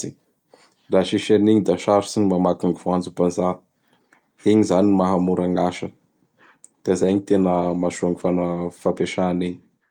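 A call bitrate drop hits this speech clip from 7.04 to 9.07 s. The encoder was starved of bits, so the sound turns coarse and watery and loses its top end for about 2 s. That fits a fall from around 64 kbps to roughly 20 kbps.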